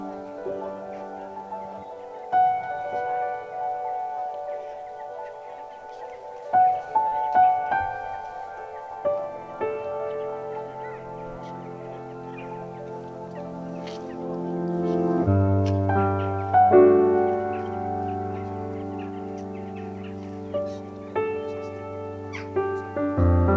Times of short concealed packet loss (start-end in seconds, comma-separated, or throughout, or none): 7.08-7.23